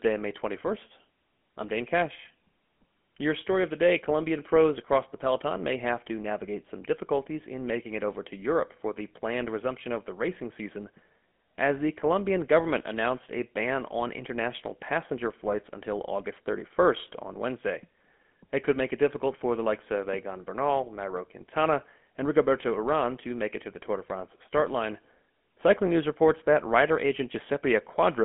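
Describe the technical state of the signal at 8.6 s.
At 8.6 s you're hearing GSM full-rate codec damage, and it runs the whole clip. The codec models the vocal tract and drives it with sparse regular pulses, giving that buzzy, gravelly grain, all squeezed into roughly telephone band with nothing above 3.7 kHz.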